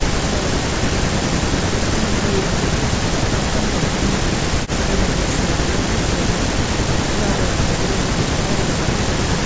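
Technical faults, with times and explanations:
Nothing goes wrong in this speech recording; it has simply passed through a call's microphone processing, which trims away the lowest bass and leaves nothing above 8 kHz, and that is just how that path is meant to sound.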